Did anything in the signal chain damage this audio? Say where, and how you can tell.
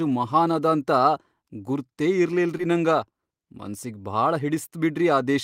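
Yes, at the network stage: there is a short concealed packet loss from about 2.57 to 2.61 s. About 20 ms of the speech never arrived in time, and the receiver's decoder bridged the gap by extending the preceding sound for roughly 14 ms before fading back into real audio. It is heard as a brief smear or wobble. On a spectrogram, the harmonics or noise band run flat and blurred across the gap. The waveform shows a repeated, slightly decaying cycle where natural variation should be.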